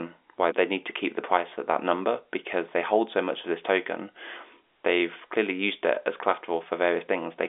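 No technical faults can be heard in this speech clip. It comes through the G.711 telephone coding path as a normal phone line does, with the sound held to roughly 300 Hz to 3.6 kHz and nothing above 4 kHz.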